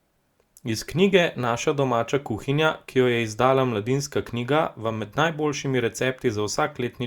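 No technical faults can be heard anywhere in the speech recording.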